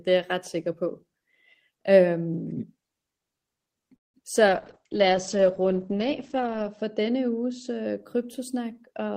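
At 3.95 s a call audio freeze stops the speech for about 0.19 s of near silence, likely a jitter buffer running empty, then resumes with nothing lost. From 4.49 s to 8.04 s a call bitrate drop sets in: the audio turns coarse and muffled, the top end falling from 20 kHz to 8 kHz, consistent with a fall to roughly 9 kbps, worst for about 2.2 s.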